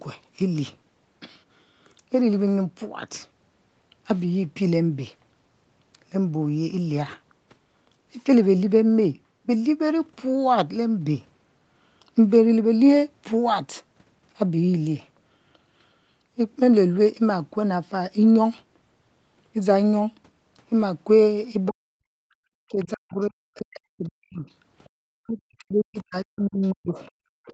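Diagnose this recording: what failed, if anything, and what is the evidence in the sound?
Call processing, echo cancellation: a faint second voice at 21.65–21.72 s, 22.82–23.62 s and from 24.84 s to the end, about 30 to 25 dB below the speech. This is other side's voice leaking through, likely residual loudspeaker echo the canceller failed to subtract.

Call processing, double-talk handling: from 21.7 s to the end the main voice sinks by up to about 40 dB while the other side talks. This is speech suppressed in double talk, likely because the canceller could not separate near speech from echo and attenuated both.

Call processing, echo suppression: room sound drops by about 40 dB at 22.1–22.31 s and 27.27–27.41 s, then recovers. This is background gated by the echo canceller, which clamps the microphone while the loudspeaker plays.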